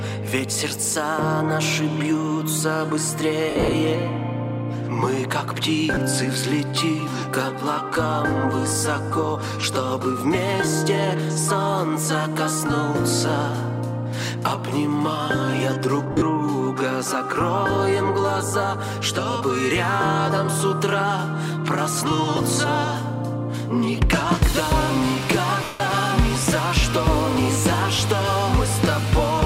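Lost LE Audio frames break up the sound four times: across 3.50 to 3.72 s (about 140 ms missing, longest gap near 70 ms), at 5.94 to 5.97 s (30 ms), over 16.12 to 16.22 s (90 ms), and in one unbroken 160 ms stretch at 25.64 to 25.80 s. Each time, the LC3 decoder keeps replaying the last spectrum with scrambled phase, so tonal content smears into noise. In the longest dropout that smear fades toward silence.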